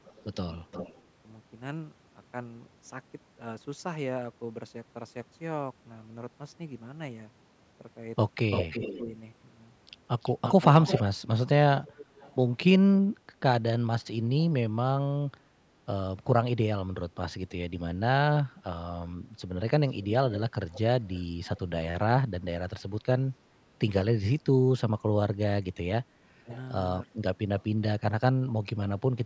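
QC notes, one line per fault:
0.04–1.02 s, echo leak: a faint delayed copy trails the speech by about 400 ms, around 15 dB down, likely loudspeaker sound the canceller missed.
8.51–9.00 s, echo leak: a strong repeat about 340 ms behind, only about 5 dB below the speech, likely uncancelled loudspeaker pickup sent back.
9.03–9.11 s, speech suppressed in double talk: the speech dips briefly, about 5 dB, for roughly 70 ms, likely the canceller turning down its own talker along with the echo.
10.22–11.03 s, echo leak: the same loud echo returns, about 340 ms late and about 5 dB down, likely residual loudspeaker sound.
11.81–12.35 s, echo leak: a faint echo about 340 ms behind, around 25 dB down, likely incomplete cancellation.
19.90–21.60 s, echo leak: a soft delayed copy about 460 ms behind, around 20 dB down, likely loudspeaker pickup passing the canceller.
26.35–26.49 s, speech suppressed in double talk: the speech drops deeply, about 25 dB, for roughly 150 ms, likely suppression while both sides talked.
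26.49–26.58 s, echo leak: a brief, faint echo about 460 ms late, around 25 dB down, likely residual loudspeaker sound.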